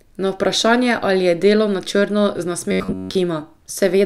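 From 2.71 to 3.16 s the speech turns into robotic sound from repeated short buffers. New audio was likely reaching playback too slowly, so the system kept looping its last short chunk and skipped the real signal in between, with most of the stretch made of repeats. The loop rate imposes a fixed 93.8 Hz pitch, which points to chunks about 10.7 ms long. It sounds like a stiff metallic buzz that only loosely follows the speech.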